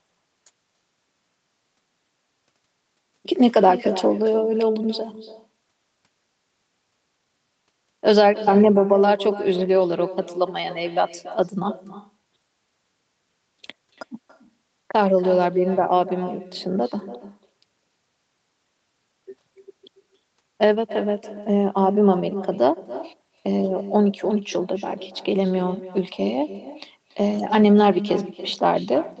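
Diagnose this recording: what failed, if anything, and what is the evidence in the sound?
The failure is at the call-processing stage: echo with no canceller. All the way through, every phrase is trailed by a fainter copy, about 14 dB down, landing roughly a third of a second later and sounding thinner than the direct speech. That's the far end playing the call out of a loudspeaker, its microphone catching it, and no echo cancellation removing it before it travels back across the network.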